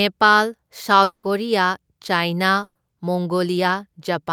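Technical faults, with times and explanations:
1.03–1.26 s, long network dropout: The last sound stretches into a fading buzz or hiss for about 200 ms, then goes quiet. The audio returns with about 200 ms missing. This is likely a network stall where the receiver filled the gap by extending earlier audio.
2.63–2.78 s, burst of packet loss: A run of packets never arrived in time. The receiver held the last sound for about 120 ms, turning it down into a brief buzz or hiss before a short silence. The speech then resumes with that stretch missing.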